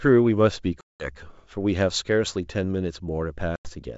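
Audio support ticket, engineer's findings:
Packet loss on the ADPCM call at 0.81–1.09 s: hard-edged silent hole of about 190 ms, roughly twenty packets. The decoder's predictor and step size drift from the sender's, so the signal resumes with brief, slight distortion.

Second dropout at 3.56–3.72 s: about 90 ms of silence, roughly ten packets. Same ADPCM state mismatch on resumption, settling within tens of milliseconds.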